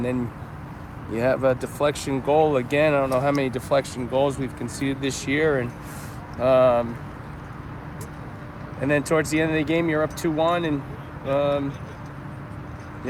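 Nothing here calls for comment, since no technical faults turn up anywhere in the recording.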